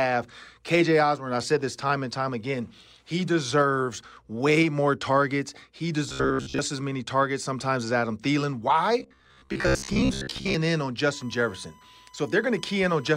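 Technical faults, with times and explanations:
6.09 to 6.59 s and 9.00 to 10.54 s, robotic sound from repeated short buffers: the speech hardens into a metallic buzz at 66.7 Hz, likely because fresh audio arrived late and roughly 15 ms snippets were replayed over most of each stretch, skipping real audio and imposing that fixed pitch.
11.13 to 13.17 s, USB whine: a steady 1 kHz tone sits about 30 dB below the speech, matching the USB bus's 1 ms frame rate, whose current pulses leak into the audio through shared power or ground and ring at that fixed pitch.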